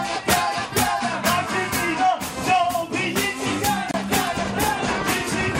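The clip has one short hole in it, a Bluetooth dropout running from about 3.91 to 3.95 s. The audio cuts to silence, and when it comes back it has jumped ahead, as though it had kept playing underneath. That points to packets likely arriving too late at the headphones and being thrown away, with roughly 28 ms of material gone, which fits a couple of lost frames rather than one long stall.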